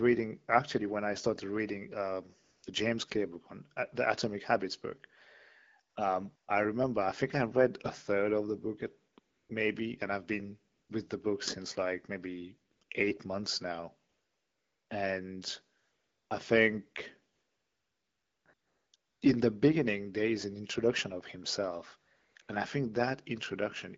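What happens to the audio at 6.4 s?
From 6.35 to 6.47 s there is a 120 ms burst of AMR comfort noise. The sending phone treated this stretch as silence and stopped transmitting speech frames. The receiver then filled the gap with synthetic noise built from a rough estimate of the background's level and spectral shape. The real background drops out and a smooth, steady hiss replaces it. It switches in and out.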